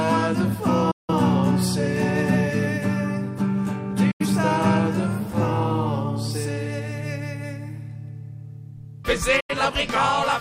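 At 0.91 to 1.13 s, 4.11 to 4.26 s and 9.40 to 9.55 s the sound mutes in digital broadcast dropouts: the receiver lost valid frames and silenced output, with 8 ms fades. The waveform and spectrogram show clean empty gaps, the first fitting about four lost frames and the others two.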